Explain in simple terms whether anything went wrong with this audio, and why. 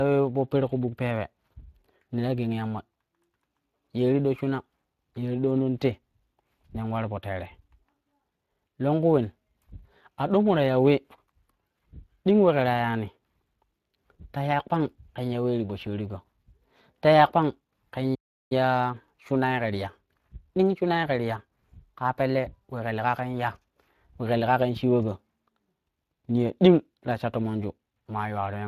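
Three things went wrong in this speech recording.

The first runs through the whole clip: Speex codec damage. Speex is an older speech compressor from internet calling and game chat. It rebuilds the voice from a simplified model instead of storing the actual waveform. Here the damage is plainly audible as a grainy, hoarse roughness on the voice. Nothing is present above 15.2 kHz, so the very top of the sound is missing.

The second is a playback stall. Right after the words "ta ya kpang ken", the sound cuts out at 18.15 s and stays silent until 18.52 s, a gap of about 0.36 s. The speech stops mid-flow instead of pausing naturally. The likely cause is that the player ran out of audio data, or was briefly held up, and could only output silence until data arrived again.

The third follows directly from the stall: time-compressed catch-up. From 18.52 s to 21.52 s the speech plays about 1.1 times faster than normal while keeping its normal pitch. 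The player does this to win back the time lost in the gap. It snips out tiny slices of audio and blends the remaining pieces together. That leaves this stretch sounding hurried.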